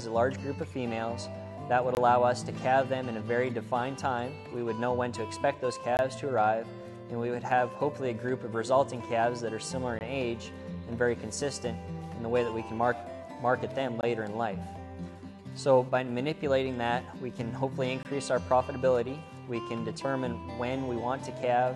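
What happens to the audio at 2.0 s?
A gap between chunks falls at 1.95 to 1.97 s: a 20 ms silence left at the join between chunks, interrupting the sound without losing any.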